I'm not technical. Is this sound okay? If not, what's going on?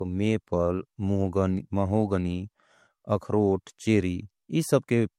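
No. Generation loss runs through the whole speech clip. It sounds swirly, hollow and smeared, with blurred starts to sounds and no sound at all above 16.5 kHz. The likely cause is saving as MP3 about four times over, each pass adding fresh damage.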